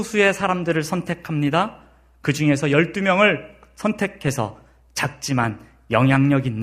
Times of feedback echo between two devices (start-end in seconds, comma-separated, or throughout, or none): none